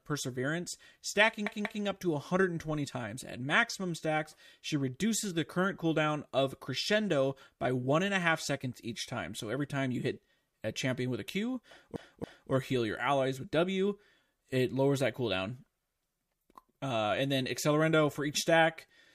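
A speech clip with repeated frames twice. At 1.47 to 1.84 s, a 186 ms block plays two extra times before "up to". At 11.96 to 12.52 s, a 279 ms block repeats twice before "heal your allies with". Each stutters, adding 0.37 s and 0.56 s.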